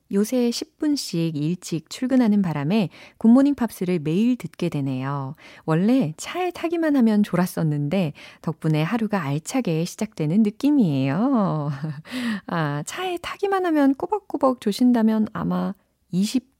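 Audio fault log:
No faults are audible in this speech recording.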